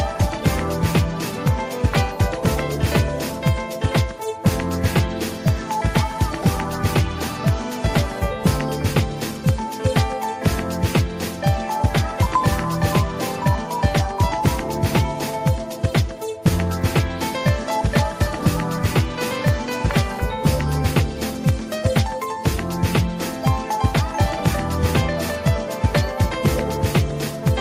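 No faults can be heard anywhere in this recording.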